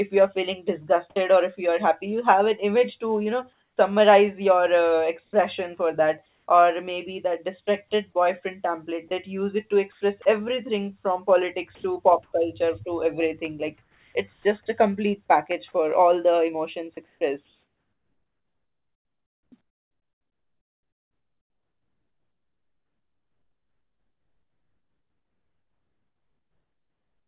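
At 1.1 to 1.16 s, just before "or if you are", about 60 ms of sound gives way to flat noise, likely sound dropped by the voice detector mistaking real audio for background. It differs from a pause because audible sound is removed mid-flow.

From 3.53 to 7.67 s, between "image to you know" and "boyfriend template that use", comfort noise likely replaces the background for about 540 ms. The detail of the real room tone becomes a steady, featureless hiss. At 7.65 s the onset is likely clipped by the voice detector: about 20 ms of the returning sound is lost, so it starts abruptly rather than fading in.

The same pattern recurs. From 9.92 to 14.45 s the background is again swapped for smooth synthetic noise, about 720 ms of it, likely comfort noise from discontinuous transmission. At 14.42 s, right before "a complete package for", the start is likely cut by about 30 ms through onset clipping. 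Unlike a dropout, clipping removes only the soft attack.

From 17.06 s to the end, comfort noise likely fills about 9.9 s in place of the real background. Over the G.711 call path, nothing is heard above 4 kHz.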